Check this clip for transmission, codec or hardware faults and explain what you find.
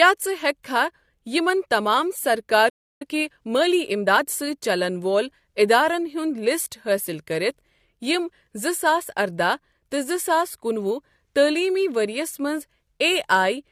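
Three faults are audible in this speech: a pre-echo near the start, a playback stall, and a time-compressed catch-up straight after it.

At 0.63 s a brief pre-echo precedes a sharp onset, spread over about 12 ms. The transform codec distributed its quantisation noise across the whole block. Because the attack sits late in that block, noise sized for the loud onset also lands in the quiet stretch ahead of it. The result is a short hiss just before the attack, which itself sounds softened and smeared rather than crisp.

From 2.69 s to 3.02 s the audio drops to silence for about 312 ms, right after "یِمَن تمام سرکار". This is a playback stall. The sound halts mid-flow and stays silent for roughly a third of a second before resuming. The likely cause is the player running short of buffered data, or its output thread being blocked, so nothing reached the output until it recovered.

Immediately after the stall, from 3.02 s to 4.26 s, the speech runs at about 1.25 times normal speed. 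This is time-compressed catch-up. Having fallen behind during the gap, the player trims its backlog by dropping short segments and cross-fading across the joins. Pitch stays where it was, so the speech sounds hurried rather than raised.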